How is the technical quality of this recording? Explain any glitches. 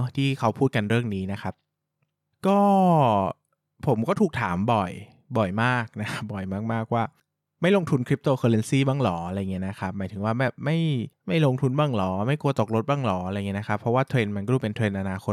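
Listening through the recording, nothing stood out as a technical problem.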